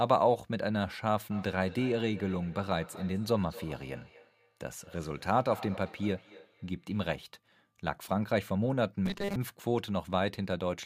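From 1.31 to 7.27 s there is feedback echo between two devices. Speech returns about a fifth of a second later, thinner, at about 18 dB below the voice. One device's microphone is picking up the other's playback.

From 9.06 to 9.36 s the speech turns into a rigid, metallic buzz at 200 Hz. This is robotic sound, likely from repeating short buffers of about 5 ms that replace most of the real audio.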